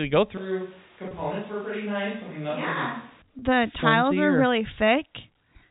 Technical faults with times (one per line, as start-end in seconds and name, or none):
0.37-3.22 switch to a distant microphone
1.08-1.11 packet loss with pitch repetition
3.39-3.42 packet loss with pitch repetition